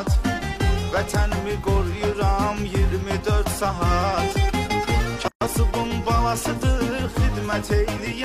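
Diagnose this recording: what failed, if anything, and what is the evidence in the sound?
A gap at a join of encoded pieces, at the codec stage, opens at 5.28 s and lasts 133 ms until 5.41 s. Separately encoded segments were joined untrimmed, keeping the encoder's start delay and end padding. Smeared edges and sound resuming exactly where it stopped distinguish this from a dropout, which loses audio.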